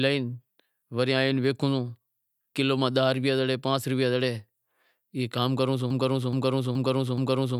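At 5.90 s, right after "کام کرووں سوں", the speech falls into a broken-record loop. A 0.42 s fragment repeats four times, back to back, until the end. The playback likely stalled and kept resending its last buffered piece. The speech that should follow is lost.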